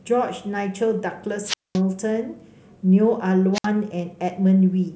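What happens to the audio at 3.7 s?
Just before 3.7 s, from 3.54 to 3.67 s, the speech suffers a wireless microphone squelch dropout. The radio link from the analogue FM transmitter weakens until the receiver's squelch shuts the output, leaving a hole of near silence lasting about 63 ms before the voice returns. A short swell of hiss or static leads into the mute, which sets it apart from a digital packet dropout, where the sound simply cuts clean with no rising noise first.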